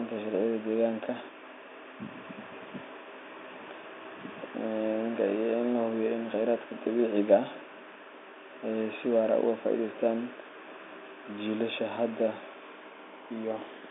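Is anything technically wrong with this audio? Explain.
No, nothing in this speech recording stands out as technically wrong. It carries the narrow sound of ordinary G.711 telephone coding, with the band limited to roughly 250 Hz to 3.6 kHz as a normal phone line would deliver it.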